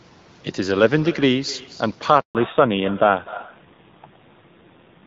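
From the first syllable, the speech carries an echo with no canceller: the far end's loudspeaker feeds back into its microphone, returning each phrase about a third of a second later, about 18 dB quieter and thinner. A spectrogram shows faint, delayed copies trailing every syllable's harmonics.

At 2.21 s a handover gap cuts the audio for 140 ms, until 2.35 s. The call switched networks and no speech frames arrived meanwhile, so the sound fades fast into silence. The waveform shows a flat line, and the spectrogram a blank vertical stripe.

Right after the gap, at 2.35 s, comes a fallback to narrowband. Before it, the clean wideband sound pointed to HD Voice at around 12.65 kbit/s. From here to the end nothing remains above 4 kHz, so the speech turns duller and rougher. The spectrogram shows a hard ceiling at 4 kHz.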